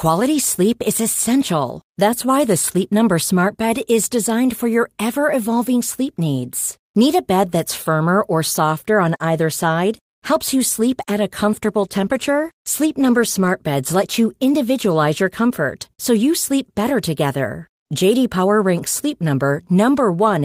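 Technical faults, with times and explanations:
11.82–14.17 s, call bitrate drop: after "sleep at a comfortable" the sound turns coarse and muffled, consistent with the encoder falling from 32 to 18 kbps for about 1.7 s. On a spectrogram the upper band thins and cuts off until "you individualize your comfort".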